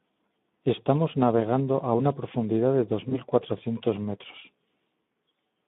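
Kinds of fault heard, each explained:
Speex codec: a hoarse, noisy CELP texture across the whole clip with nothing above 3.6 kHz, fitting roughly 11 kbps, grainier than MP3-style swirling artefacts.
VoIP packet loss concealed by the speech codec: around 3.10 to 3.16 s the sound smears into a brief, fading stretch of buzz or coloured noise, pointing to one lost 20 ms frame, not a silent dropout.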